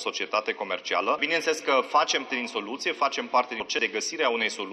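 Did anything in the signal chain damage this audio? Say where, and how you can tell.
Yes, at the codec stage: compressed frames skipped, twice. At 2.30 s the audio jumps forward, losing around 200 ms, and again from 3.60 to 3.79 s it drops around 300 ms. Either whole frames were missing from the file or the decoder rejected them as corrupt.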